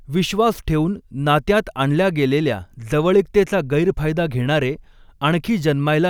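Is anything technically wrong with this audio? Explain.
No, there are no technical faults.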